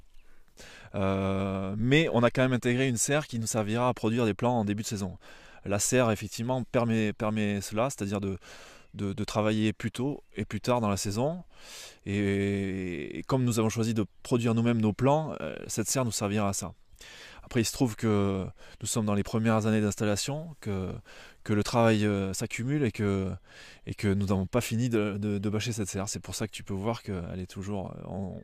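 No technical faults are audible anywhere in the recording.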